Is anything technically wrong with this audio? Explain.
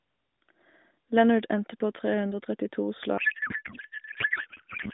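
Yes. From 3.18 s to the end of the clip there is a codec payload misread. Octet-aligned AMR frames are unpacked as bandwidth-efficient, so every field lands in the wrong bits. The speech becomes garbled noise and warble that barely follows it. On a spectrogram the clear harmonic striations give way to smeared, irregular energy.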